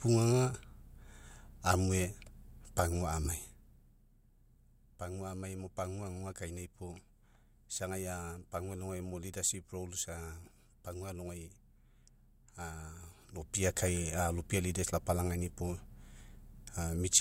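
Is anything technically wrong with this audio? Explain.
Yes. From 13.22 to 13.7 s a rapid ticking rides on the speech while the level changes by about 10 dB. This is zipper noise: the gain moves in unsmoothed steps, around 50 a second, each leaving a small click.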